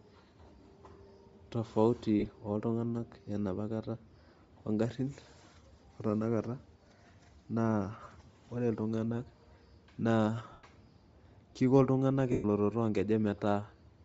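Throughout the speech there is plainly audible codec damage, likely Bluetooth LC3 compression at around 32 kbps with 7.5 ms frames. The transform coder zeroes much of the upper spectrum and fills it with noise, so consonants and vowel edges take on a breathy, grainy sheen. On a spectrogram the high band looks speckled and patchy, with noise-like texture replacing the finer harmonic detail.

Lost LE Audio frames then break in four times. At 2.20 to 2.26 s about 45 ms goes missing in pieces scattered over 60 ms, the longest run around 30 ms. A shorter 22.5 ms loss follows at 8.04 to 8.06 s. Longer gaps come at 10.52 to 10.64 s (112.5 ms) and 12.32 to 12.45 s (120 ms). The decoder repeats the last spectrum with randomised signs, which smears the sound into a hiss, and the longer gaps fade toward silence. On a spectrogram these appear as blurred, harmonic-free blocks in 7.5 ms steps. On the waveform they look like noisy stretches that shrink in amplitude.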